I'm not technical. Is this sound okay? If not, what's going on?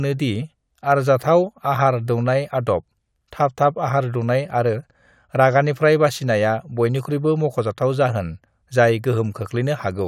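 Yes, no technical faults can be heard in this recording, so nothing needs fixing.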